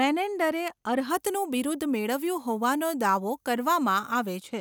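A speech clip in which pre-emphasis was left on from 1.10 s to 4.40 s: the treble lift applied for transmission was never undone by the matching de-emphasis, and the tilt fits a 50 µs FM curve. Highs sit about 11 dB above 1 kHz at 10 kHz, so the sound turns thin, bright and sibilant.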